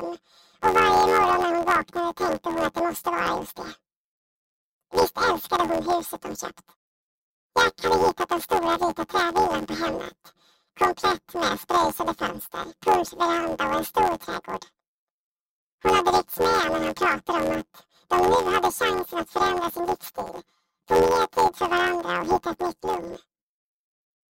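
From start to end the audio shows planar audio read as interleaved. Each block of left samples followed by right samples is being read as alternating channel pairs, so each block plays twice at double speed. The blocks are short, about 11.6 ms, which fits a 512-sample block, so the result is a robotic buzz at about 86 Hz with no clear octave shift. A spectrogram shows evenly spaced vertical striations every 11.6 ms, and the waveform jumps at each block boundary.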